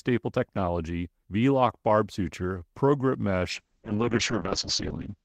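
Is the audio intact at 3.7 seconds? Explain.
No. At 3.7 seconds the clip is inside a call bitrate drop that starts at 3.54 s and runs to the end. The call's bandwidth estimate fell and the encoder was pushed from 32 kbps down to 6 kbps, holding that floor for about 1.3 s. With so few bits the coding turns coarse and the audio band shrinks from 20 kHz to 8 kHz, so the speech sounds rough, watery and muffled.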